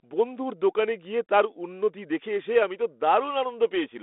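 No technical faults can be heard in this speech recording. It has the narrow sound of a G.726 ADPCM telephone path at 32 kbit/s, with a band from 250 Hz to 3.6 kHz, nothing above 3.8 kHz, and only a light trace of coding grain.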